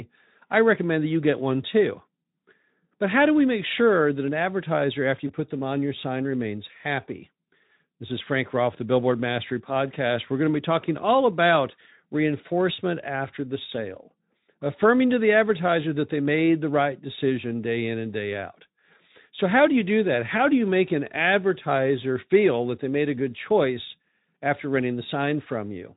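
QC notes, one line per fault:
5.27–5.32 s and 10.81–10.85 s, VoIP packet loss concealed by the speech codec: each gap sounds like a single dropped 20 ms frame. The decoder stretches the last pitch and filter into a brief buzzy tone or fading coloured noise, then the following frames stay weak or distorted while the Speex decoder recovers.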